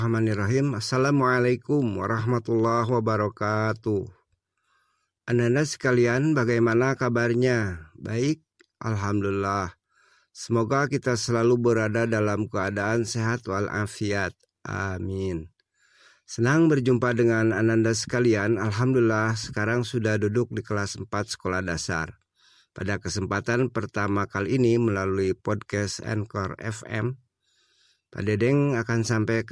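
Nothing in this recording stands out as a technical fault, so there's nothing to flag at any point along the way.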